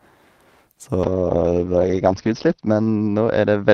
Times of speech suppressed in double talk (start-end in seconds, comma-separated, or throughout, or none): none